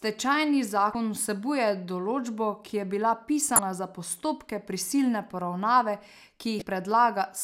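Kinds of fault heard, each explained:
Damaged data in a compressed stream: at 0.92, 3.56 and 6.59 s, each about 30 ms, corrupted bytes make the decoder misread frames and lose sync until the next header, leaving a brief blip just before "vsebuje določbo ki je" and after "določbo ki je bila".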